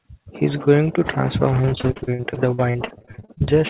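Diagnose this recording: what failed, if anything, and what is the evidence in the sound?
From 1.62 s to 3.48 s the speech turns choppy, with a robotic, stuttering edge as pieces drop out in quick succession. This is repeated packet loss (robotic sound) at the network stage. Nearly thirty short holes, the longest about 44 ms, were each patched by extending the preceding sound, so roughly a third of that stretch is concealed rather than real. The band-limited G.711 call path, with nothing above 4 kHz, carries it.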